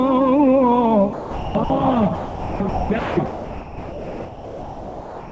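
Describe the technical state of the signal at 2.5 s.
At 2.5 s the sound is missing. From about 2.15 s to 2.60 s, roughly 450 ms, it gives way to a steady noise bed and then resumes. This is likely sound dropped by the voice detector: the sending side judged that stretch to be background and stopped transmitting, and the receiver filled the gap with generated comfort noise. The noise has the same upper limit as the call's coded audio, with nothing above 8 kHz.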